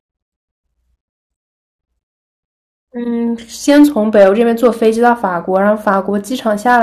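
Crackle rides on the speech peaks from 3.69 to 5.12 s, again from 5.56 to 5.94 s, and from 6.68 s to the end: hard clipping, with peaks driven about 5, 2 and 3 dB past the ceiling and sliced flat.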